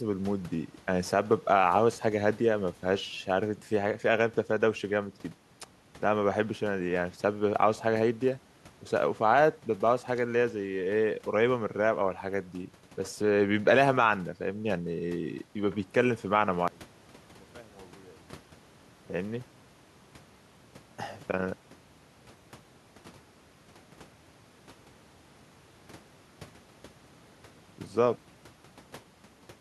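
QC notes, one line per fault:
16.68–18.83 s, one channel inverted: the speech drops by about 26 dB, likely one side's polarity flipped, so the centred voice cancels when summed to mono.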